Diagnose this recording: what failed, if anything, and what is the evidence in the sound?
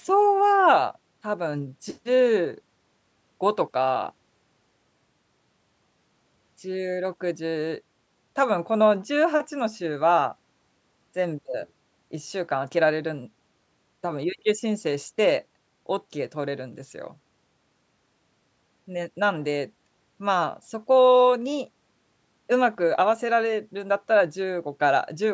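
Nothing failed here: the speech shows no fault in the sound, and the call microphone processing only trims the lowest bass and leaves nothing above 8 kHz, as that stage normally does.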